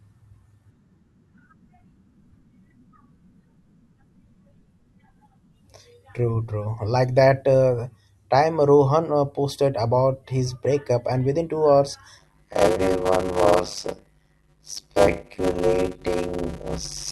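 From 12.18 s to the end at 17.11 s, the speech takes on a steady 100 Hz buzz and slows to about 0.53 times its normal speed while keeping roughly its normal pitch. This is a block size mismatch (padded): each block arrives short and is filled out with silence, which fits 256-sample blocks being read as 480-sample blocks.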